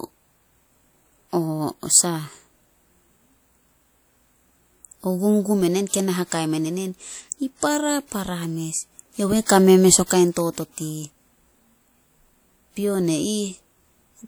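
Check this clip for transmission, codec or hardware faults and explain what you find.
There is one codec fault: pre-echo, heard twice in this speech. At 5.88 to 5.93 s, just before "kei na hakai men", a short hiss runs ahead of the onset for about 53 ms. At 10.06 to 10.10 s, after "kame mes o", the same smear lasts about 47 ms. The transform codec spread its quantisation noise across the whole block, so noise meant for the loud attack leaks into the quiet moment before it and softens the onset.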